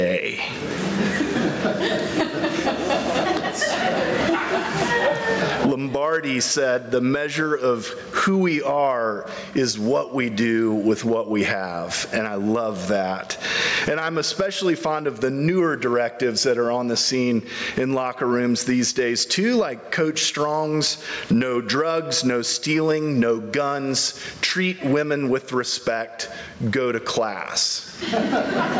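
Gain pumping throughout: the gain swings about 15 dB, pulled down under loud sounds, likely from excessive gain hitting a fast limiter.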